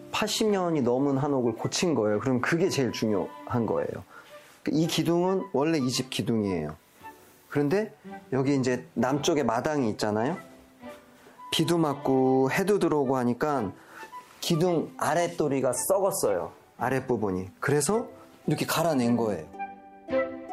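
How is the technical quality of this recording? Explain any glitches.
No audible glitches or faults.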